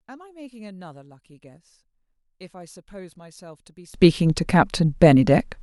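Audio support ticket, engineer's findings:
One channel inverted, 0.00–3.94 s. Mono sum collapses: centred speech and low end drop by about 29 dB, leaving only a faint residue of inter-channel differences. Likely a polarity flip on one leg (swapped balanced pair or inverted gain stage). Waveform: near-flat envelope until 3.94 s, then full-level speech. Spectrogram: energy almost absent across all bands, faint traces only, sharp return across all bands at 3.94 s.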